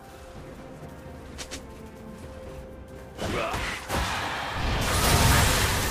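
No dropouts, distortion, timing errors or other transmission defects are audible anywhere in the recording.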